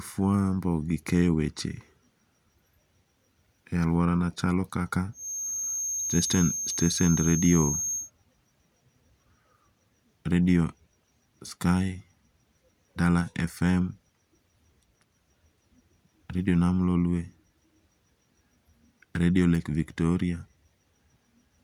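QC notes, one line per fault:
5.11–8.11 s, feedback whistle: after "chalo kaka" a thin steady 6.4 kHz tone sits just under the speech, wavering slightly, likely a speaker-to-mic loop held at the edge of feedback; a flat horizontal spectrogram line.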